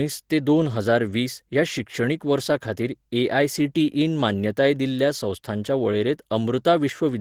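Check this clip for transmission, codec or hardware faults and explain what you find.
Two faults are present in this speech recording: codec damage that runs the whole way through, and a single click partway in.

Opus voice compression affects the entire clip and is plainly audible. The voice sounds slightly hoarse and faintly robotic. The full audio band is kept, since nothing is cut off until about 20 kHz, so this is not muffling. The damage comes from hybrid coding. A linear-prediction layer handles the lower band and codes the excitation coarsely, and a transform layer covers the top. That points to a rate around 16 kbps in 20 ms frames.

An electrical switching spike occurs at 4.99 s. It is a sharp snap laid on top of the speech, very brief and distinct from anything the talker produces. The likely cause is a nearby switch, motor or static discharge arcing for an instant, with the audio line picking up that burst as a short electrical impulse.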